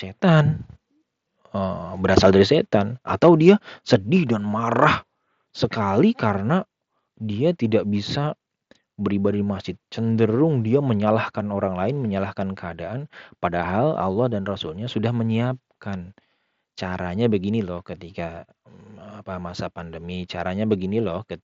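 Speech, carried over a Bluetooth mSBC headset link that limits the band to 8 kHz. Microphone overload is heard three times: 2.17 to 2.27 s, 3.24 to 3.5 s just after "dari setan", and 3.93 to 3.95 s. The peaks exceed the converter's limit by about 4, 2 and 1 dB. Their tops are flattened, giving a harsh crackle. The input gain was likely set too high for the converter. The microphone volume then steps down at 3.96 s, by about 4 dB, just before "dan marah sekali karena". It drops again at 11.37 s, by about 1 dB, between "di masjid cenderung dia" and "orang lain menyalahkan keadaan". Both level and background fall abruptly. Call software likely reduced the device gain after finding the microphone too loud or clipping.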